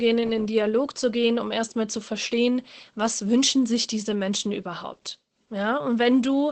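The whole speech clip carries Opus voice compression: nothing comes through above 8.5 kHz, and the voice sounds muffled, a bit hoarse and faintly robotic from coarse linear-prediction coding, which fits wideband SILK running at around 12 kbps.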